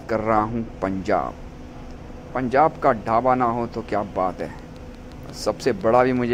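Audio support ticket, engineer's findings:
Train of clicks, 4.40 s to 6.18 s. Regular ticking at 5.67 clicks per second, about ten in all. Each click has much the same shape. Peaks sit roughly level with the surrounding sound, so they are heard as ticking over it. Likely cause: periodic pulse injection, such as interference from nearby equipment or a faulty connection or power supply. Even spacing suggests a repeating source, not random damage. Check cabling, grounding and interface load around that point.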